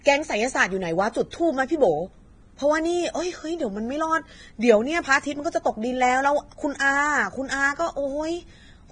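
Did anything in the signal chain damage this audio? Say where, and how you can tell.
Yes. From start to finish the speech sounds hissy and grainy: the treble turns into a rough, fizzing wash, tones have a coarse edge, and consonant attacks are smeared. Nothing is present above 9.7 kHz. The stage is the codec, most likely heavy Vorbis compression at a bitrate that fits roughly 22 kbps. The encoder lowered its cut-off and quantised the upper residue so coarsely that fine treble detail was replaced by noise of similar energy.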